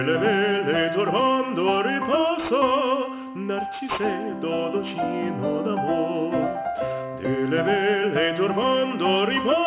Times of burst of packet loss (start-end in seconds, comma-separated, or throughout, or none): none